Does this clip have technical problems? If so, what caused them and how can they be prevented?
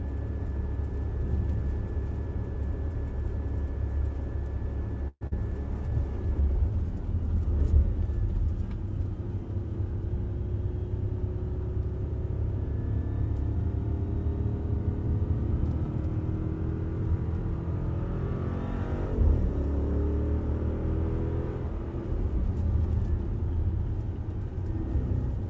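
Yes. There are three problems.

From 5.08 to 5.33 s the sound carries on as a fading continuation for about 234 ms, then drops to silence for about 40 ms, and roughly 100 ms of audio never returns. This is most likely a long network dropout: packets stopped arriving and the receiver filled the gap with concealment. A short packet loss would not sound like this, because it leaves nothing out and produces no silent stretch. Prevention: use a more stable network path and enable forward error correction or redundancy.

From 5.38 to 6.72 s the audio plays at 96% speed with its pitch unchanged, which stretches it by 62 ms. This is a jitter buffer slow-down. After the dropout the buffer raised its delay by something near 70 ms, and it built that reserve by repeating tiny slices of the signal. A stretch like this sounds drawn out, but the pitch stays put, unlike a tape or clock drift. Prevention: reduce network jitter so the buffer does not need to grow.

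From 12.44 to 13.63 s the audio runs at 104% speed at the same pitch, and roughly 50 ms is trimmed away. This is a jitter buffer speed-up. The buffer held more audio than its target, so it cut short pieces to reduce the delay. It is trimmed in small pieces rather than gapped, and that sets it apart from a dropout, which loses a single chunk all at once. Prevention: keep packet delivery even so that packets do not arrive in bunches.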